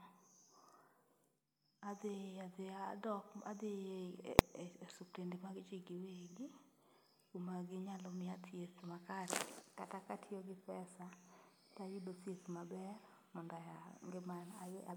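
At 4.39 s there's a single sharp bang in the speech: invalid numbers at full scale. Some calculation blew up into infinite or invalid values, and those got pinned to the maximum output level. The block is so short, about 0.67 ms, which fits a 32-sample block, that you hear one hard crack rather than separate pops with silence between.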